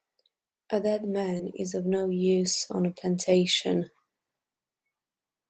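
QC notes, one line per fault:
1.37–1.41 s, short concealed packet loss: a brief smear just before "is of"; about 20 ms of audio arrived too late, and the decoder extended the preceding sound to cover the gap.
1.39–1.41 s and 1.91–1.93 s, lost packet rebuilt from error correction: two 20 ms patches, the second between "is of" and "use on a plantation", sound rougher and noisier because they were decoded from the low-bitrate Opus backup copy of each lost packet.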